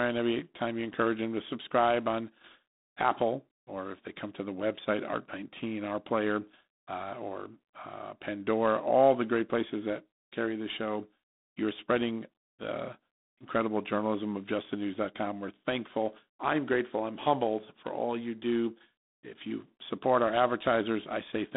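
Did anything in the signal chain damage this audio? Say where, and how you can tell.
Yes. Throughout the speech there is a harsh, rasping hiss that rises and falls with the speech level, and the band is confined to about 200 Hz to 3.7 kHz, with nothing above 3.8 kHz. This points to the codec stage, G.726 ADPCM, and the plainly audible damage fits its 24 kbit/s mode. That mode sends only 3 bits per sample of the difference from an adaptive prediction, so the coarse quantisation noise tracks the speech.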